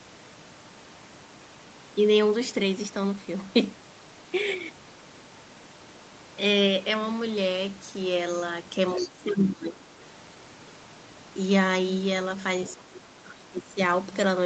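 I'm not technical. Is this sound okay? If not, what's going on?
No, not quite. At 8.96–9.08 s and again at 12.65–12.74 s, a faint second voice briefly slips in: the other side's voice leaking through, likely loudspeaker echo the call didn't fully cancel. Alongside that, from 8.96 to 9.97 s and from 12.75 to 13.79 s, the main speaker gets noticeably quieter and patchy. That's speech suppressed in double talk, with both sides likely talking at once.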